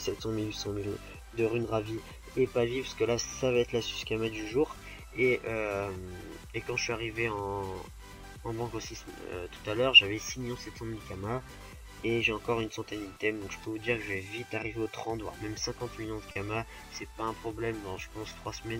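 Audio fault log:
throughout: clock drift between sender and receiver. The sender's clock runs roughly 3% slow, so the jitter buffer keeps draining and the receiver must pad the stream. On a waveform this shows as small recurring discontinuities and duplicated fragments scattered unevenly across the whole clip.
0.06–18.69 s: repeated timing corrections. Short pieces are repeated again and again, always lengthening, at uneven spacing. This plays the material back at about 98% speed and adds roughly 0.4 s overall, heard as slight hiccups and a dragging tempo. A spectrogram shows brief stretched or doubled slices.
16.31–16.38 s: short stall from a late packet. A packet arrived 40 ms late and the buffer ran dry, so the receiver held the last sound for 40 ms and then resumed with nothing lost. A waveform shows a smeared, repetitive stretch. A spectrogram shows horizontally frozen, buzzy bands.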